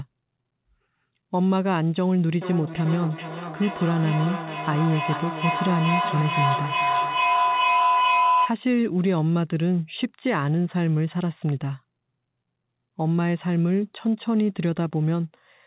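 At 2.41 s a feedback howl starts and runs until 8.61 s. Two devices in the same room are sharing the call. Sound leaves one loudspeaker, reaches the other microphone, and returns louder on each pass. The repeats pulse at roughly 0.4 s and narrow to a tone near 1 kHz. At its loudest the howl sits about 2 dB above the speech. It stops when the loop breaks. The whole clip is band-limited to 4 kHz, which points to a telephone codec such as G.711.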